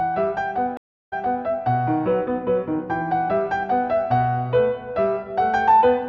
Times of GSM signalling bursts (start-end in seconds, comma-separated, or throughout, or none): none